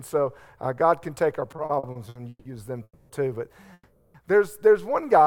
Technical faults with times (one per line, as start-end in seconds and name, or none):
1.51-2.47 repeated stalls (stutter)
2.83-3.11 call audio freeze
3.73-4.16 call audio freeze